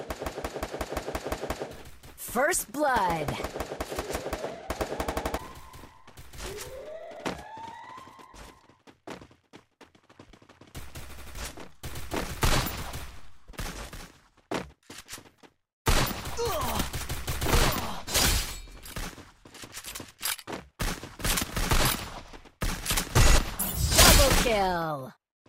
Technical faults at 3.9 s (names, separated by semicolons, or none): none